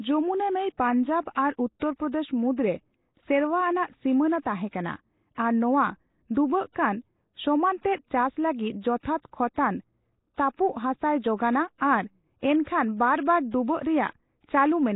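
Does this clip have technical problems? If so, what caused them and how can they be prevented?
Yes. Throughout, the speech is rough, hissy and underwater-smeared, with nothing above 3.8 kHz. The likely cause is heavy Nellymoser compression, consistent with a 16 kbps stream. Its fixed two bits per sample starve weak bands, which are then filled with noise. On a spectrogram this shows as a hard ceiling at 3.8 kHz and grainy, blocky fill below it. To prevent it, capture or export with a modern codec at a higher bitrate.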